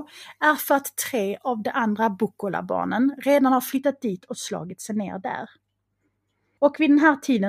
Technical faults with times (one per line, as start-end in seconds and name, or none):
3.77-7.48 de-emphasis applied wrongly